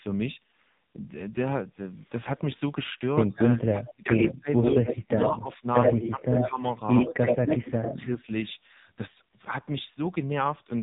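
From the first moment to the end, the speech carries the sound of the AMR narrowband mobile codec. Nothing above 3.8 kHz survives, so a spectrogram shows a hard ceiling with empty space above it. The voice is rebuilt from a vocal-tract model fed with sparse pulses, and the damage is heavy: buzzy, synthetic and thin, which fits a low AMR-NB mode around 5.9 kbps. The harmonics look smeared and grainy rather than cleanly striped.

Between 4.82 and 6.6 s the level of the speech sags and breaks up. The deepest dips fall about 15 dB, and the loss adds up to around a second in pieces across that stretch. The waveform shows the envelope pinched into uneven gaps, and on a spectrogram the energy thins in those chunks. This is likely speech suppressed in double talk: an echo canceller that could not tell this talker from returning loudspeaker echo and turned both down together.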